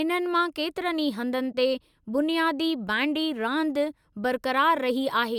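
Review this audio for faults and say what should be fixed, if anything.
A corrupt frame was concealed from 1.52 to 1.55 s. Flipped bits in the compressed AAC stream made the decoder reject the damaged data and substitute its own fill over about 30 ms of the speech, consistent with two lost frames. Protecting the transport with error correction or checksummed retransmission would keep corrupted frames from reaching the decoder.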